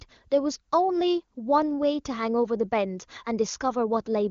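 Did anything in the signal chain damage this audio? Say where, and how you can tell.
No, none of the stages in the chain leaves audible damage on this speech. The AMR wideband (HD Voice) codec can be heard in the band limit near 7 kHz, but its coding leaves at most faint traces, which fits its highest mode of 23.85 kbit/s.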